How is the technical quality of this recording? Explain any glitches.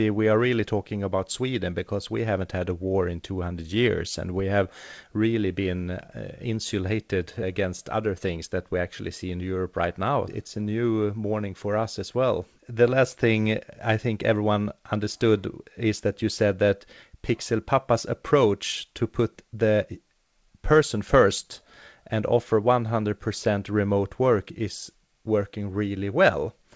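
No glitches can be heard anywhere in the recording. The speech has come through a call path that leaves nothing above 8 kHz, which fits a wideband call codec such as G.722 working as intended.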